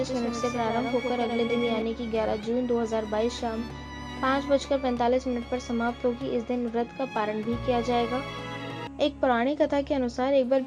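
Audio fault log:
0.00–1.82 s, doubled audio track: a second full-band copy, about 5 dB quieter, trails by roughly a tenth of a second until it cuts off abruptly at 1.82 s, likely from a slower capture path. Unlike echo or reverb, it has no decay or room colour.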